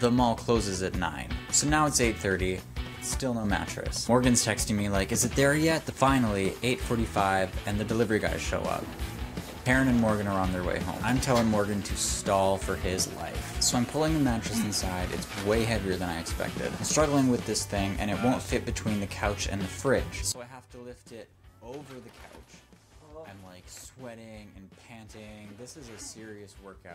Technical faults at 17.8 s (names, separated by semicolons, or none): none